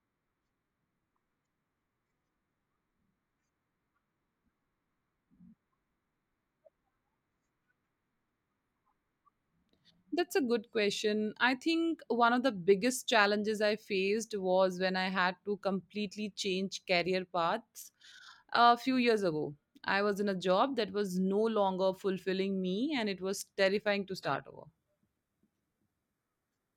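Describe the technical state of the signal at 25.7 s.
At 25.7 s the speech sounds thinner and more processed, with nothing above 15.3 kHz and stronger codec artefacts. The change arrives abruptly at 24.17 s without any gap and lasts to the end. This is an adaptive stream at a lower bitrate, consistent with a switch from 96 kbit/s AAC-LC to roughly 20 kbit/s HE-AAC.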